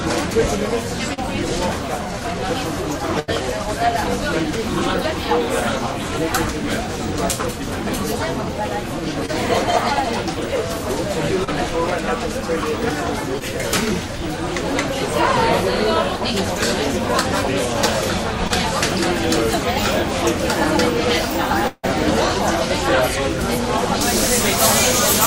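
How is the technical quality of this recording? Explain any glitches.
The recording has several network glitches and a tonal fault near the end.

Short concealed packet loss occurs at 1.13, 9.26, 11.44, 13.39 and 18.48 s. Each time, a small slice of audio, 20 to 40 ms, failed to reach the decoder in time. The receiver filled the hole by extending the last sound, then blended back into the real signal. Each one is heard as a brief smear or wobble. A short transient can simply disappear.

A burst of packet loss runs from 3.19 to 3.30 s. About 80 ms of audio went missing in a row. The receiver continued the previous sound for roughly the same span and faded it as the gap went on. The result is a short held buzz or fading hiss. The audio then picks up further along, and the part in between is gone.

A longer gap sits between 21.68 and 21.85 s. This is likely a long network dropout. About 160 ms is lost. 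A fading continuation of the last sound fills most of it, and the final 40 ms or so drops to silence. Then the audio resumes, skipping the missing stretch.

Pre-emphasis left on affects the last portion, from 24.01 s to the end. The treble was boosted for transmission, and the matching cut was never applied. Highs sit about 14 dB above the 1 kHz level at 10 kHz, which fits a 75 µs FM curve. The sound turns thin, bright and hissy.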